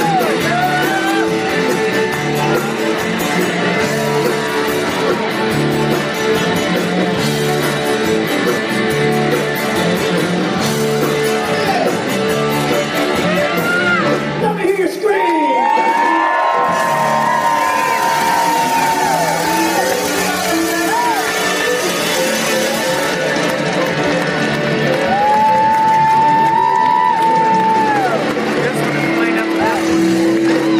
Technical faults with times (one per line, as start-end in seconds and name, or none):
10.01-10.04 corrupt frame decoded
24.85 corrupt frame decoded